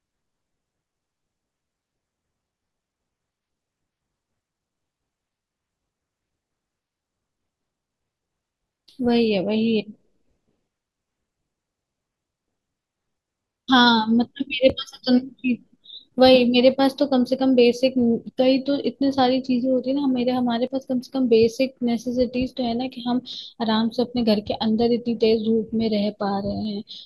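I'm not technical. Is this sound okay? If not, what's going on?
No, there are small skips at 8.72, 14.70, 20.67 and 26.65 s, about every six seconds: audio missing between chunks, likely a tiny sliver dropped as the recorder switches chunks.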